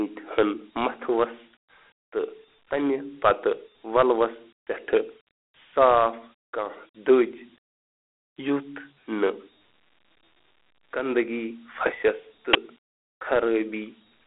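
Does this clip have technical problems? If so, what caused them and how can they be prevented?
Yes. Throughout the speech a gritty hiss rides on every syllable, and the sound is confined to a telephone band of roughly 250 Hz to 3.4 kHz, with nothing above 3.8 kHz. This is Dialogic VOX ADPCM: each sample is coded as a coarse 4-bit step, and the 32 kbps rate fits 8,000 samples a second. Recording or archiving in a linear, wider-band format instead of VOX would prevent it.

At 12.53 to 12.56 s a loud burst of digital noise lasts about 22 ms. This is an uninitialised buffer: a block was played before audio was written to it, so leftover memory came out as samples. The length fits a 1024-sample buffer. Clearing buffers to zero before playback, or holding output until they are filled, would prevent it.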